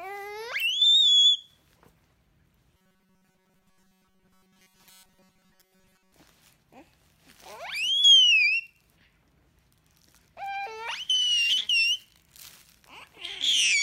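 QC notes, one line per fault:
2.77–6.12 s, robotic sound from repeated short buffers: rigid metallic buzz at 188 Hz, likely one buffer of about 5.3 ms looping while fresh audio went missing.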